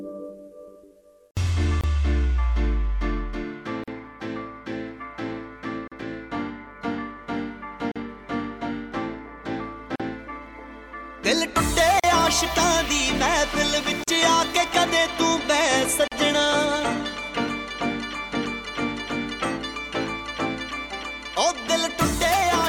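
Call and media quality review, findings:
Gap at a join of encoded pieces: segments encoded separately and concatenated untrimmed, so encoder start delay and last-frame padding remain. Silent dropouts about every 2 s at 1.81 (26 ms), then 40 ms at 3.84, 5.88, 7.92, 9.96, 12.00, 14.04, 16.08; sound resumes where it stopped.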